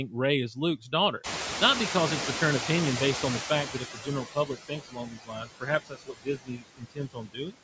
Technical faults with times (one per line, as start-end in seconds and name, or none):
0.00-7.63 noise suppressor artifacts
1.23-4.21 noise suppressor catching up
3.66-7.55 speech cut by the noise suppressor